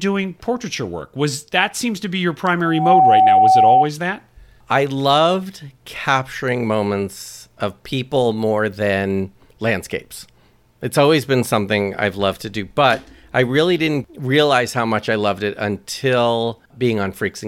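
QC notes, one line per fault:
2.65–3.91 s loudspeaker feedback squeal: a 754 Hz tone swells within a fraction of a second to well above the speech, as the microphone-loudspeaker loop gain exceeds one there.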